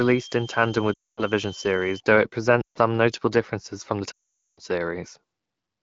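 From 0.0 to 2.0 s, before "though it", a switching supply whistle sits around 3 kHz, wandering between 3.06 and 3.23 kHz at about 20 dB below the sound. A power converter is cycling in an audible burst mode or beating with another one, leaking a thin tone whose pitch shifts with load.

Lost AMR speech frames cut in three times: 0.94 to 1.23 s (240 ms), 2.62 to 2.78 s (140 ms, between "though it" and "notable differences from the"), and 4.11 to 4.60 s (460 ms, after "notable differences from the"). Corrupted frames failed their checks, so the wideband decoder repeated earlier parameters at falling gain. Each gap drops within two frames to near silence, then returns weak or rough for a moment.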